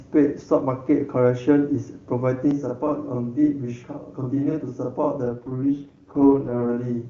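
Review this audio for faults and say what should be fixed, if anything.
Channel delay (doubling) from 2.51 s to the end: one channel arrives about 46.4 ms late, which fits a 2048-sample buffer, and the two are summed to mono. The late copy sits at full level as a distinct slap or doubled sound. To prevent it, align both channels' buffers before the mono downmix, or take a single channel.

AMR rate drop from 5.24 s to 6.69 s: the AMR-WB codec, clean at 23.85 kbit/s before this, is pushed down to 6.6 kbit/s, its lowest mode. The band and continuity stay intact, but the sound turns rough, raspy and synthetic until the higher rate returns. To prevent it, improve the radio link so the network has no reason to lower the codec rate.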